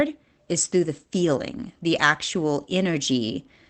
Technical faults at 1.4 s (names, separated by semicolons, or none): none